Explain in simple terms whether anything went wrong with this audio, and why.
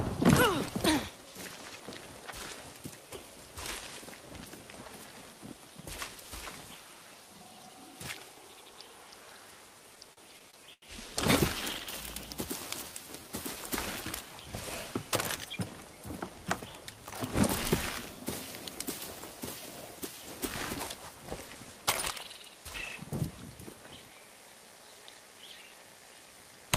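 Between 9.95 and 10.84 s there are repeated stalls (stutter): the audio data kept arriving late, so the receiver's buffer ran empty six times. Each time it stretched the last sound to cover the wait, about 187 ms in all, the longest wait 89 ms. Nothing is lost, but the sound drags and stutters.

From 12.92 to 13.29 s a jitter buffer slow-down happens: the receiver was building up a reserve by repeating tiny slices of the sound. That adds about 54 ms, so this stretch plays at 88% speed, drawn out but at unchanged pitch.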